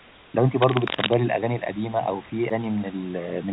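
Speech recorded through a narrowband call path, with nothing above 4 kHz, which fits G.711 mu-law at 64 kbps, over room noise about 25 dB below the speech, carries three faults. From 0 to 0.34 s there is comfort noise in place of the background: the opening quiet is a steady, featureless hiss, about 29 dB below the loud parts and about 2 dB quieter than the real room sound that follows. The likely cause is discontinuous transmission, where the sender stops sending during silence and the receiver synthesises shaped noise. It differs from a noise gate or dropout because the gap is filled rather than silent, and from genuine room noise because it lacks texture. From 0.62 to 1.14 s, cable scratch noise lays dense, uneven crackling and rustling over the sound, only a little below the speech in level, likely from a worn cable, connector or control whose contact resistance jumps as it moves. Its ragged, clustered bursts set it apart from steady hiss or the isolated single clicks of vinyl damage. 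At 2.5 s a CD skip gives a tick and a very brief mute of a few milliseconds, after which playback resumes from a different point on the disc. The displaced continuation is what separates it from a lone click or a network packet loss, which would conceal the gap rather than jump.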